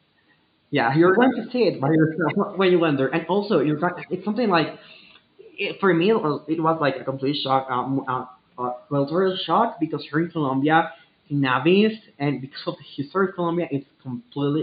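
The speech recording has no technical faults. A faint background noise from the room sits about 48 dB below the speech.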